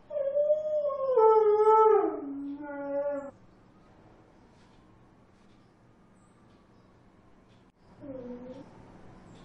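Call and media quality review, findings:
Compressed frames skipped at 3.29–3.31 s, 5.45 s and 8.60 s. The sound jumps ahead about 400, 200 and 150 ms. This points to the decoder dropping or missing 23.2 ms frames. It differs from a dropout because there is no silent gap.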